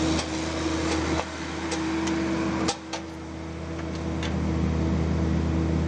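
At 3.1 s there's a burst of loose connector crackle, lasting only about a tenth of a second, through 3.21 s. It's the classic sound of a worn or dirty contact shifting: the connection makes and breaks in quick, uneven succession, so the audio gets chopped in and out. You hear that as an irregular scratchy crackle sitting on top of the sound, starting and stopping with the movement.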